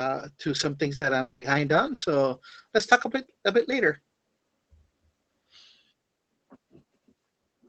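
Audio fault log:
0.95–1.04 s and 1.94–2.05 s, burst of packet loss: Right after "to some things", about 60 ms of the last sound is stretched and fades before 40 ms of audio goes missing, with a 20 ms shift in delay. At 1.94 s, 80 ms is filled and 80 ms is lost the same way.
1.01–1.05, 1.41–1.45, 1.74–1.78 and 2.02–2.06 s, lost packet rebuilt from error correction: Each 40 ms stretch plays without a gap but sounds rougher and noisier. The decoder filled the lost packet from a low-bitrate copy carried in the next one, which fits Opus in-band forward error correction.
1.21–1.44 s, long network dropout: About 200 ms is carried on as a fading continuation of the preceding sound, then 20 ms of silence, and 200 ms of the original never returns. The likely cause is a stretch where no packets arrived at all.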